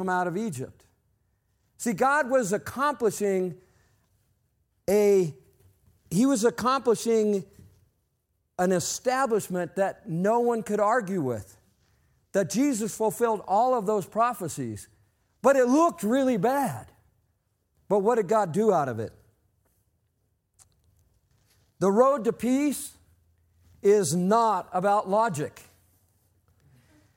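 No technical faults are audible.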